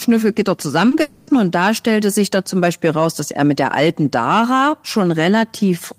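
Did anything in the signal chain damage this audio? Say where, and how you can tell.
Yes, and it's all on the network side of a call. You get short concealed packet loss twice in quick succession, at 0.89 to 0.93 s and again at 0.95 to 0.99 s. Each is about 20 ms where nothing reached the decoder in time, so the receiver bridged the gap by extending the last bit of speech and blending back in. It comes across as a quick smear or wobble in the voice, two of them nearly back to back.

Right after that, from 1.01 to 1.29 s, there's what sounds like a long network dropout: roughly a quarter second where the speech turns into a stretched, fading buzz or hiss. That's the concealment running out of real material and just carrying on the previous sound, with no stretch of outright silence. When the speech picks up again, that chunk is simply gone. The likely cause is a burst of lost packets following those two earlier short losses.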